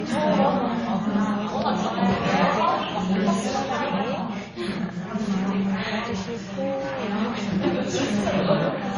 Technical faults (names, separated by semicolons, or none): transcoding between lossy codecs